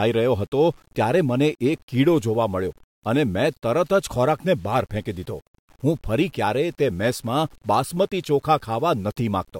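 There are no technical faults to describe in this speech recording, so there is nothing to place in time order.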